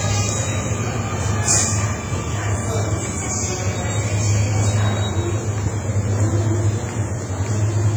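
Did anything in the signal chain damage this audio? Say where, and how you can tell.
Yes, at the codec stage. Throughout the clip, the sound rings and smears, with a washy hiss that swells and fades with the signal and weak detail dropping out. That heavy damage likely comes from WMA compression at a low bitrate, around 24 kbps.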